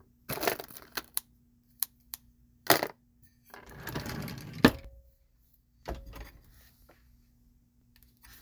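Periodic USB or driver dropouts run from 0.88 s to 7.81 s in this everyday-sound recording, recurring every 0.99 s. Each time, a background task stalls the audio path and around 10 ms of audio is skipped outright, leaving a regular tick wherever sound is present.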